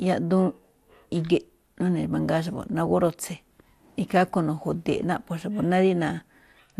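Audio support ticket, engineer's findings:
Dull, band-limited speech throughout; top end drops in and out, gurgling granular grit, plainly audible. Likely MP2 compression at a low rate, consistent with roughly 80 kbps. Too few bits for 32 sub-bands: upper bands switched off intermittently, remaining bands coarsely quantised.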